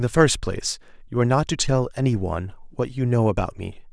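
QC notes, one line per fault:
No faults found in this speech clip.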